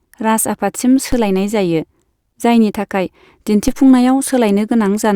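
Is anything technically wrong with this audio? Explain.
Yes. The speech contains two DC steps, at 1.12 s and 3.68 s. At each one the waveform's zero line jumps suddenly by about -10 dBFS, as if an offset had been switched into the signal path. The offset does not hold. It drains away through a high-pass near 2 Hz. Each jump is heard as a short low thump or click. The speech itself carries on unchanged through both.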